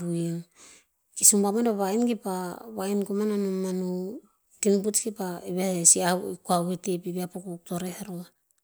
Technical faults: none

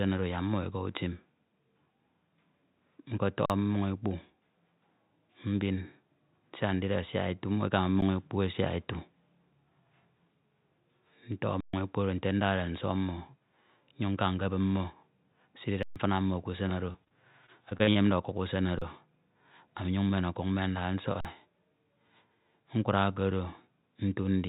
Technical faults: underrun with held sample; repeated packet loss (robotic sound)

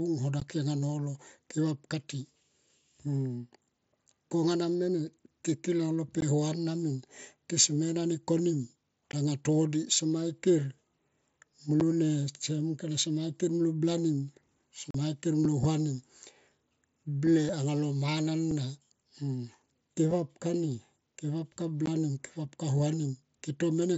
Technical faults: unconcealed Bluetooth headset packet loss

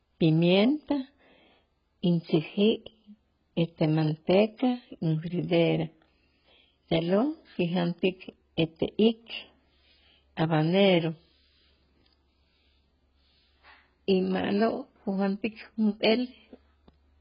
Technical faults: AAC compression

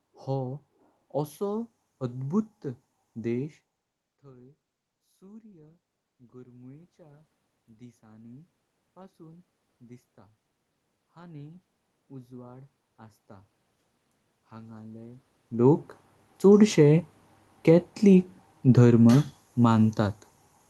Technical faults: automatic gain rising; automatic gain falling

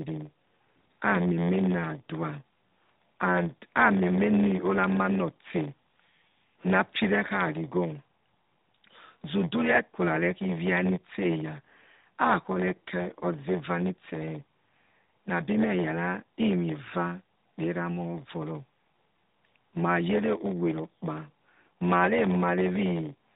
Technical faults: block size mismatch (padded)

